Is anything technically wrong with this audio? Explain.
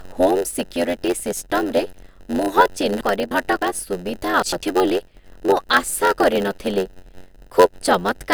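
Yes. There are two faults.

Block size mismatch (padded), throughout: one stage hands over blocks shorter than the next stage expects, and the shortfall is filled with silence. That gap repeats as a 91.9 Hz buzz, and the speech runs at 0.919 times normal speed with its timbre unchanged.

Frames out of order, at 3.01–3.62 s and 4.43–4.63 s: adjacent runs of frames were decoded in swapped order. Each stretch plays with its halves exchanged, runs of about 0.28 s in the first and about 0.09 s in the second. The result is a garbled flutter, and no time is lost.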